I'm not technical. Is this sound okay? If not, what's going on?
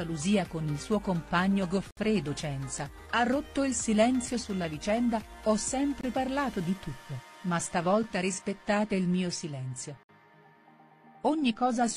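No. The stream arrives in two-second pieces, and at a few joins the timing leaves a tiny gap between pieces, a gap between stream segments. The player fills each gap with silence, so the sound briefly drops out with an abrupt cut: near 1.91–1.97 s, 6.01–6.04 s, at 8.03 s and 10.03–10.09 s. Nothing is actually missing; everything is just pushed slightly later.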